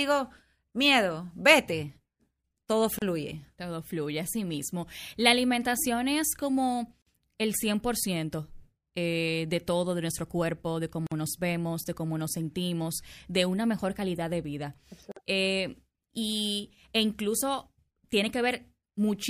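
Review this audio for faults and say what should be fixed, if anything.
Gaps at joins of encoded pieces cut into the speech at 2.99, 7.02, 11.07 and 15.12 s, every 4 s, lasting about 33 ms and then 49 ms. The join at 11.07 s falls after "de nuestro cuerpo de". Each piece was encoded separately and joined untrimmed, so encoder delay and last-frame padding leave silence that shows as thin vertical blank stripes and flat waveform dropouts with smeared edges. To prevent this, encode the audio as one continuous stream, or trim each piece's encoder delay and padding before joining.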